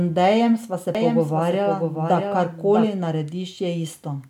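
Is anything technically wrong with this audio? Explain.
Yes. From 0.95 s to 2.87 s, just after "sva se", a doubled audio track appears, likely from a second, slower capture path mixing the same speech back in. A dry copy trails by roughly 0.7 s at about 5 dB lower, switching in and out abruptly.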